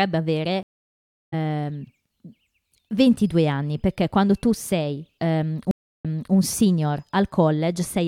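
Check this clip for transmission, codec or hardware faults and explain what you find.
Two stream reconnects are audible in this speech clip.

From 0.63 to 1.34 s, a stream reconnect: the connection dropped, leaving about 0.69 s of silence. A fresh decoder then restarted mid-stream, and the speech resumes roughly 0.7 s later, skipping material. A plain dropout would resume where it left off.

From 5.71 to 6.34 s, another stream reconnect: 0.33 s of silence, after which a resent burst restarts playback 0.30 s earlier, repeating a short stretch of speech. Each restart begins muted or faded in, unlike a hard splice.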